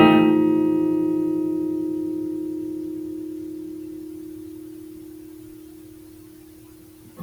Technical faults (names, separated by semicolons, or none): none